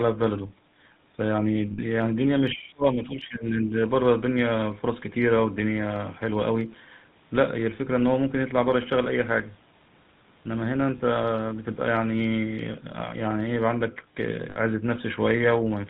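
The whole clip passes through the GSM full-rate codec, whose pulse-driven vocal-tract model and coarse excitation fit a 13 kbps stream. Everything above 4 kHz is gone, and the speech carries a plainly audible buzzy, gravelly roughness from start to finish.

From 1.72 to 1.79 s come lost GSM frames. The decoder stops receiving usable data, consistent with about three frames missing, and repeats the last good settings. That gap of roughly 60 ms comes out as a brief, rough metallic ring where the speech should continue.

Between 2.54 and 3.74 s the speech dips, by up to around 20 dB, over roughly a second in total. This is likely speech suppressed in double talk, with an echo canceller turning the talker down while the far side was also active.

At 10.98 to 11.01 s a single short loss of GSM frames, about 20 ms and consistent with one frame, leaves a very brief metallic smear in place of the speech.

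From 14.50 to 14.57 s lost GSM frames return, again pointing to about three frames missing and about 60 ms concealed. The decoder holds the last good sound as the same rough, metallic ring.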